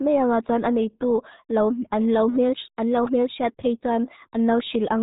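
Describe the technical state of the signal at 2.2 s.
At 2.2 s the speech carries the RealAudio 14.4 codec damage that runs through the whole clip. The coder squeezes speech into very few bits, so nothing above 3.8 kHz survives and the remaining band is rebuilt coarsely, which fits an 8 kbit/s stream. The result is muffled, gargly speech. A plain low-pass filter or telephone band limit would sound dull but clean, whereas here the heavy gargle marks a codec.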